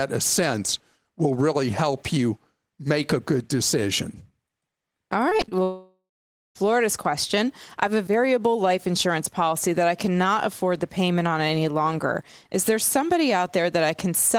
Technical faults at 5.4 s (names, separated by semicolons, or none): repeated packet loss (robotic sound)